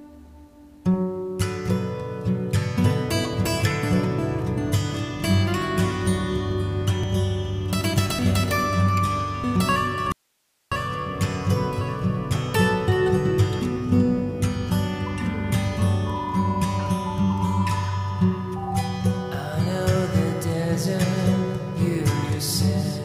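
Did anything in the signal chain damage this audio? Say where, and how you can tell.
Yes. At 10.12 s the sound drops out abruptly for about 0.59 s, returning at 10.72 s: an audio dropout to a faint residue. The gap holds hiss around 45 dB below the signal rather than digital silence, so the path downstream stayed live while the source fed nothing, likely a momentary break in the analogue wiring or connector. On a waveform the envelope collapses to a thin noise floor with sharp edges; a spectrogram shows a vertical band of faint broadband hiss.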